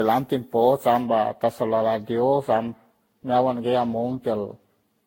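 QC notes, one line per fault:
Throughout: generation loss. The speech sounds swirly and hollow, with blurred consonant onsets and nothing above 16.6 kHz. That is more damage than a single encode near 60 kbit/s would cause, so the likely cause is repeated lossy re-encoding, probably around ten Vorbis passes. Each pass quantises the previous pass's artefacts again on a shifted frame grid, so noise and spectral holes pile up.
1.01 s to end: de-emphasis applied wrongly. From this point the treble falls away smoothly, about 10 dB lower at 10 kHz than at 1 kHz. The speech turns dull and muffled. A high-frequency cut meant to reverse pre-emphasis was applied to audio that never had that boost, or it was applied a second time. Either way the top end is pulled down instead of restored to flat.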